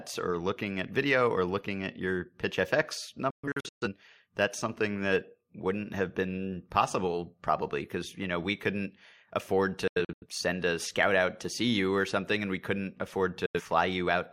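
Speech that cuts to silence in short, fast-faded holes at 3.30 to 3.88 s (before "that's something that wouldn't"), 9.87 to 10.26 s (after "know we couldn't afford") and 13.46 to 13.61 s (after "we couldn't"). This is a digital broadcast dropout: the receiver muted over lost or corrupted frames, and that stretch of the programme is lost.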